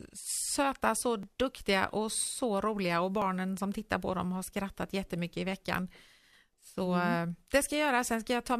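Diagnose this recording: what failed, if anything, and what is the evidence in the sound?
Stage: network streaming, at the joins between delivered segments. This speech clip has an overlap between stream segments at 1.23 s, between "söta så" and "duktiga och så roliga", and again at 3.22 s, between "och så roliga och" and "som tittar på dem". Each is a barely perceptible skip. The player trimmed about 11 ms of audio that was never actually duplicated, so the waveform steps abruptly, which a spectrogram shows as a thin full-band vertical line.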